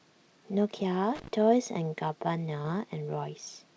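A speech recording carried over a call path whose band stops at about 8 kHz, consistent with a wideband codec such as G.722, with two separate faults. From 1.15 to 1.28 s there is loose connector crackle: an irregular burst of scratchy clicks where a worn or dirty contact is making and breaking as it moves, chopping the signal. It differs from digital clipping or codec distortion because it is ragged and random rather than tied to loudness, and it stops as soon as the contact settles. At about 2.62 to 2.66 s comes short concealed packet loss. Roughly 20 ms of audio failed to arrive in time, and the receiver bridged the gap by extending the preceding sound before blending back, leaving a brief smear or wobble. Unlike the crackle, it is a single smooth glitch with no scratching texture, and it may swallow a short consonant rather than adding noise on top of the speech.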